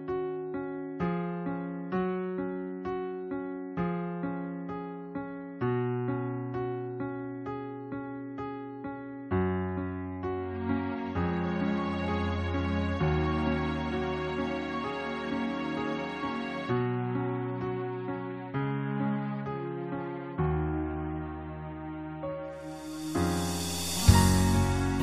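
No technical faults can be heard anywhere in the audio. Nothing in the sound breaks, stalls or drops out at any point.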